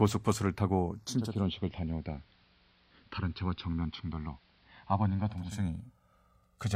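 Throughout the speech the two channels are drifting apart: each comes from a device on its own clock, off by around 200 parts per million, so the delay between them grows to roughly 1.5 ms by the end. In mono this sounds like slow flanging, and a spectrogram shows comb notches gliding gradually across frequency.

At 1.06 s a digital radio blends to analogue, cross-fading over 420 ms to the AM broadcast and returning at 5.69 s. The spectrogram shows a hiss floor, roughly 35 dB down, filling the pauses. The waveform drops about 2 dB.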